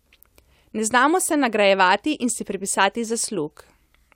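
Nothing in this recording stands out as a technical fault; it's just someone talking, with no dropouts, glitches or other problems along the way.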